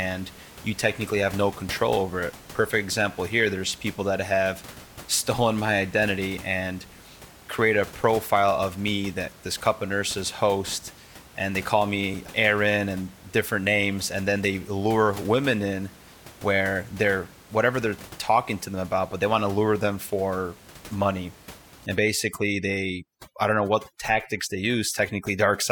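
Right after "lure them for money", from 21.86 s to the end at 25.71 s, there's overdone noise removal. The room noise, sitting about 21 dB under the speech, gets gated band by band, so the background drops and breaks up into twinkling specks.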